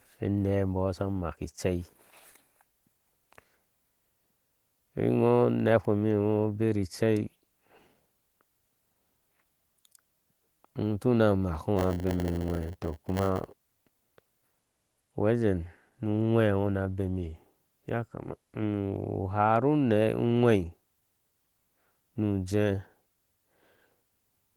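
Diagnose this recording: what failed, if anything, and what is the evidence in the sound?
Buffer stage: block size mismatch, padded, 11.75 to 14.74 s. Short blocks are zero-filled, buzzing at 100 Hz. Speech slows to 0.919 speed, timbre unchanged.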